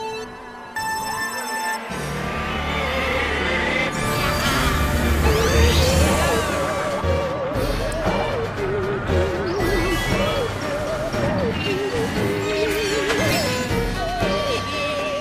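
At 7.92 s there is an electrical switching spike. It is a sharp snap sitting on top of the sound, reaching about -15 dBFS. The likely cause is a nearby switch, motor or static discharge arcing briefly and being picked up by the audio line.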